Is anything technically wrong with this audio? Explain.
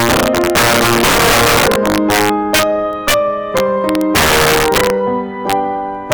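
Yes, two faults affect this music.

Integer overflow runs through the whole clip. The signal was driven about 8 dB past the integer ceiling. Instead of being limited, the loudest peaks (a small fraction of samples) wrapped to the opposite sign, swinging across the full range. On loud passages this produces violent cracks, harsher than ordinary clipping.

Word clock ticks occur from 0.41 s to 5.95 s. The receiving device ran on its own clock, not locked to the digital source, with the two drifting apart by a few tens of parts per million. Each time they slipped past each other, a single sample was dropped or repeated. The result is about ten sharp ticks, roughly every half second, of uneven strength.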